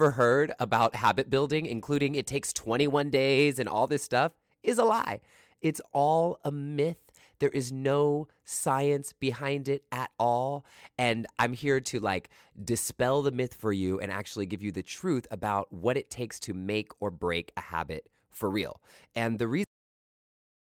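At 19.64 s the speech has a cut-off end: the final stretch of audio was never written, so it stops mid-sound and drops straight to digital silence for the last second. Unlike a fade-out or a natural pause, there is no decay or room tail at all.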